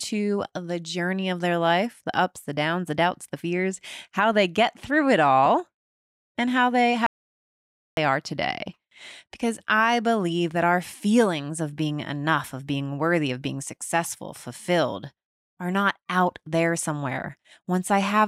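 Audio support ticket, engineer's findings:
Audio dropout to silence, 7.06–7.97 s (about 0.91 s). Speech cuts after "and how they", resumes at "are today". Gap is silent, no room tone: flat line on waveform, blank column on spectrogram. Likely input link or device lost while recorder kept writing.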